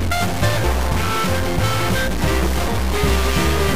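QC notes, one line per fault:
throughout, stuck bit: there's a noisy distortion riding on everything, and the quiet gaps fill with hiss instead of dropping to silence. That's most likely one data bit held fixed at the converter, knocking roughly half the sample values off by that bit's weight.
0.63 s and 2.67 s, damaged data in a compressed stream: two quick glitches, each about 15 ms. Corrupted bytes in the encoded stream threw the decoder off, so it garbled those frames.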